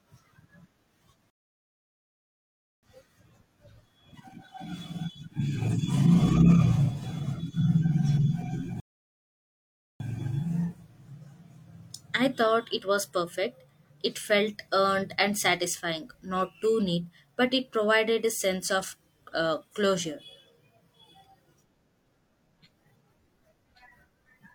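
At 1.30 s and again at 8.80 s the speech hits a rebuffering stall: the player starved, went silent for about 1.5 s then 1.2 s, and picked up exactly where it left off.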